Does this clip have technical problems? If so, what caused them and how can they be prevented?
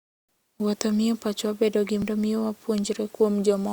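Yes: at 2.02 s, just after "miyo pachwa bedo gi", damaged data in a compressed stream makes the decoder misread a frame, lose sync and search for the next frame header, giving a brief glitch: a discontinuity in the waveform. Checksummed transfer and error-resilient streaming prevent it.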